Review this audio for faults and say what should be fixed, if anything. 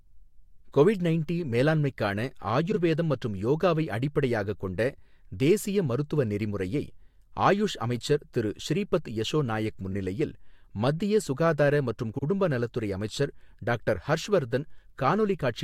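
Frames out of order shows up four times in this speech, each as a brief garbled flutter: 2.71 to 2.77 s, just after "கொவிட் நைண்டி மேலாண்மைக்கான"; a very short one at 7.36 s, after "தேசிய மருத்துவ நெறிமுறையை"; 9.90 to 9.95 s, after "திரு ஸ்ரீபத் யசோ நாயக்"; and 12.14 to 12.23 s. In each, two adjacent chunks, about 21 ms, 24 ms, 21 ms and 85 ms long, got decoded swapped. Nothing's lost, just shuffled, so the fix is a proper resequencing step. Have the receiver reorder by sequence number or timestamp before decoding.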